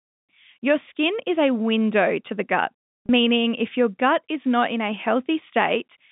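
At 3.06 s, between "window to the gut" and "if your gut is", there is a brief packet loss with pitch repetition lasting about 30 ms, which fits a single lost packet. The receiver filled the gap by replaying the last pitch cycle, so the sound holds and buzzes briefly instead of dropping to silence. That sustained, slightly tonal smear distinguishes it from a plain dropout or a click. Around it, the telephone band shows G.711 coding behaving as expected.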